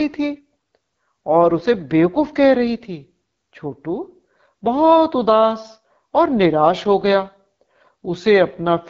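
Throughout, AMR wideband (HD Voice) codec damage makes the speech rough and raspy, with nothing above 7.5 kHz, which fits one of its lowest bitrates, around 8.85 kbit/s.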